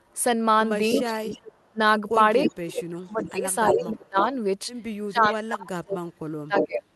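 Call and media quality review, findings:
Echo leak at 0.92–1.67 s, 2.50–2.55 s, 3.22–4.23 s, 5.23–5.35 s and 6.58–6.66 s: a discrete delayed copy of the audio arrives 330–341 ms late. It ranges from about 5 dB to about 35 dB below the direct signal. The likely cause is incomplete echo cancellation on a loudspeaker endpoint. The fixed third-of-a-second lag separates it from room reverb.

Speech suppressed in double talk at 1.03–1.79 s, 2.44–4.31 s and 5.03–6.88 s: the near talker ducks by roughly 25 to 35 dB, in pieces totalling under half a second, then about a second and a half twice. The likely cause is the echo canceller's suppressor misjudging overlap. This is gain reduction tied to overlap, not packet loss.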